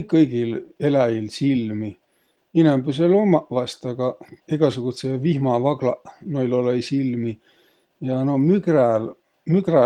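No technical faults occur in this speech, so there are none to describe in time order.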